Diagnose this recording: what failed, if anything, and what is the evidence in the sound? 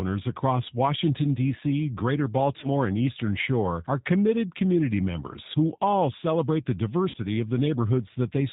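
The whole clip carries the sound of a G.729 codec. The speech is band-limited with nothing above 4 kHz, and it has that slightly rough, synthetic edge you get when a decoder rebuilds the voice from a vocal tract filter, a pitch predictor and a handful of pulses per frame. The damage is plainly audible and fits a G.729A coder at 8 kbit/s. That's the codec stage doing what low-rate CELP does.

There are also two network dropouts, VoIP packet loss concealed by the speech codec. The first runs from 2.60 to 2.67 s, and the second from 7.10 to 7.18 s, right after "who all celebrate the". In both spots the speech smears into a buzzy tone or a coloured noise that fades as the decoder keeps extrapolating its last pitch and filter while ramping the gain down. The gaps point to roughly 20 ms and 40 ms of missing packets.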